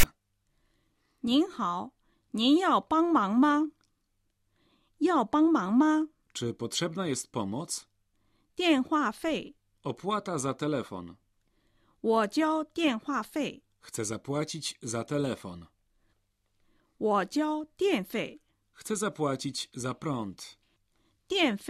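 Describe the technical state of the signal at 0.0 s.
Right at the top, from 0.0 to 0.03 s, you get file tags played as audio. The player has treated a block of text metadata at the head of the file as if it were sample data, so the character bytes come out as a loud, harsh rasp that sits lopsided, pushed off to one side of zero. It's a short burst of static with hard edges on both ends.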